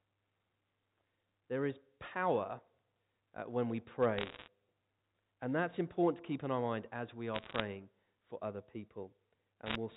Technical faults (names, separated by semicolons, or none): bit errors on a digital phone line